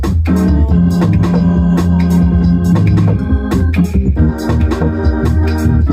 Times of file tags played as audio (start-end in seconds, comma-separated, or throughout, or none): none